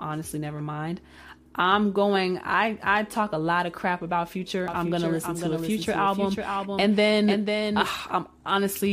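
It's a speech clip with a doubled audio track from 4.68 to 8.24 s: a second full-band copy trails about half a second behind, roughly 5 dB down, with no room tail, and it cuts in and out abruptly. That's likely a second, slower capture path getting mixed in.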